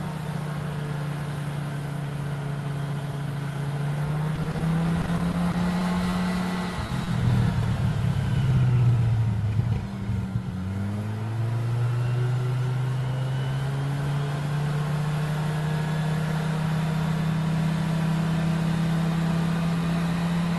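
From 4.35 to 4.62 s there is repeated packet loss (robotic sound): four gaps, the longest 30 ms, patched by extending the preceding audio, so about a third of that stretch is synthetic. The result is choppy, with roughly 60 ms of material gone. The same fault returns from 5.02 to 6.15 s with seven shorter gaps of up to 20 ms, concealed over about 12% of the span, giving a lighter but persistent warble.

At 6.87 to 6.91 s a short stall from a late packet occurs. The jitter buffer ran dry, and the receiver held the last sound for 20 ms until the packet arrived. Nothing is lost, but the sound hangs briefly before continuing, and playback ends up 20 ms later.

From 7.05 to 7.09 s a short concealed packet loss removes 20 ms of audio. The decoder bridges the hole with a continuation of the preceding signal and blends back in, leaving a brief smear or wobble.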